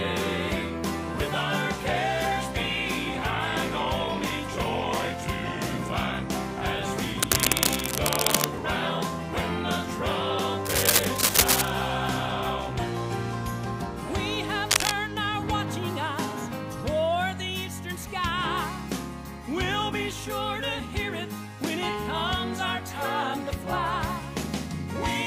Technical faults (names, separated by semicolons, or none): cable scratch noise